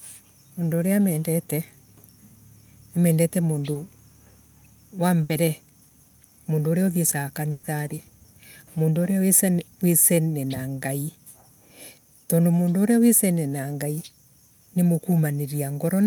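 At 3.73 to 3.77 s a short concealed packet loss leaves a brief smear: about 20 ms never arrived, and the decoder extended the preceding sound to cover it.

Two bursts of packet loss follow, at 5.23 to 5.31 s (60 ms lost) and at 7.51 to 7.65 s (120 ms), just after "mundu uria uthiesaga". Each gap is bridged by a held, fading continuation before the audio jumps ahead.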